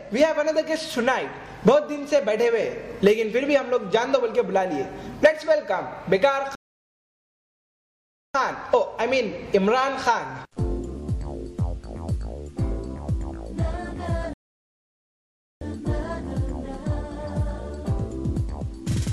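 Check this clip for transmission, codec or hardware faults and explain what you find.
Two rebuffering stalls interrupt the clip, at 6.55 to 8.35 s and at 14.34 to 15.61 s: playback ran dry waiting for data, falling silent for about 1.79 s and 1.28 s, then resuming exactly where it stopped.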